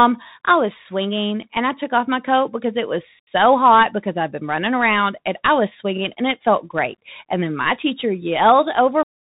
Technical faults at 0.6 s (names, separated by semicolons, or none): Bluetooth CVSD headset codec